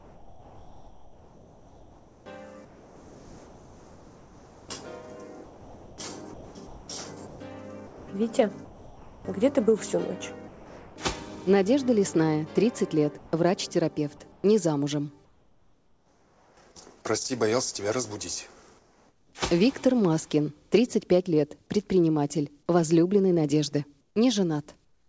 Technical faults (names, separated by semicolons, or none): sound chopped by the voice detector; sound dropped by the voice detector; comfort noise in place of the background